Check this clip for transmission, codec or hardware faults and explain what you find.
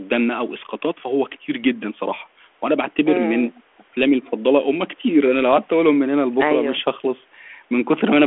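Nothing stood out on listening to this speech recording that would point to a transmission, codec or hardware problem.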